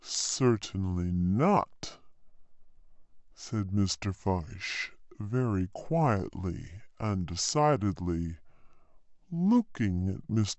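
From start to end, the audio is being played back at a slower rate than it was captured at, with no resampling in between: a wrong sample rate. The slowdown fits material recorded at 32 kHz but clocked out at 22 kHz. Because nothing converts the samples, speed and pitch drop together: the speech runs at about 0.69 times its proper pace and sits roughly 6.5 semitones low, sounding deep, dragged and sluggish throughout.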